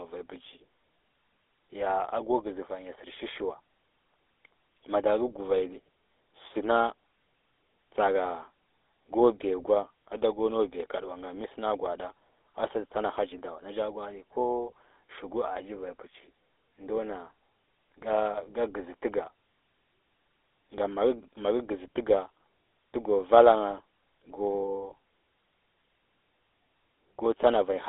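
Throughout the speech, GSM full-rate codec damage: pulse-driven excitation gives a buzzy, gravelly roughness, unlike clean band-limiting, with nothing above 3.8 kHz, consistent with 13 kbps.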